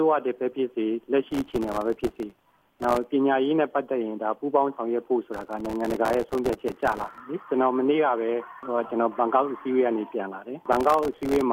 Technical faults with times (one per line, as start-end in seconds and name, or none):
1.31-3.04 processor overload crackle
5.33-7.20 processor overload crackle
10.72-11.41 processor overload crackle